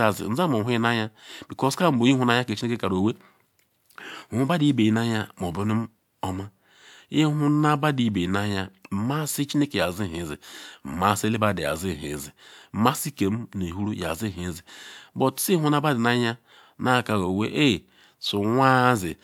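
No technical faults can be heard anywhere in the recording.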